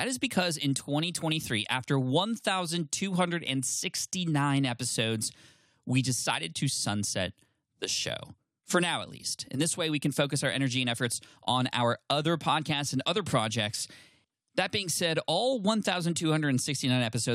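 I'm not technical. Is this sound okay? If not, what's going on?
Yes, this one's fine: I listened all the way through and there's nothing wrong with how the recording sounds.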